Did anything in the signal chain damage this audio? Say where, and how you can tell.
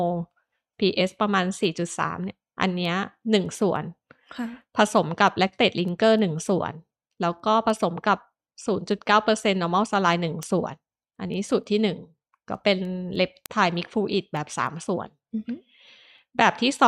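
Yes, at the digital interface between two devices. A sharp tick repeats at a steady rate, roughly every third of a second, from 0.13 s to 16.79 s, around fifty in all. That's word clock ticks: the receiver ran on its own clock instead of locking to the sender's, and the spacing suggests the two disagree by something like 70 ppm. Each time they slip past each other, a sample gets dropped or repeated, and that glitch is the tick you hear.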